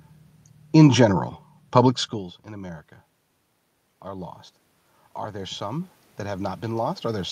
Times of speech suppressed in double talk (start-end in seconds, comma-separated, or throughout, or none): none